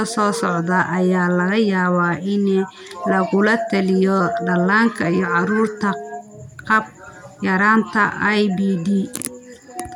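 A speech recording with nothing technically wrong with it.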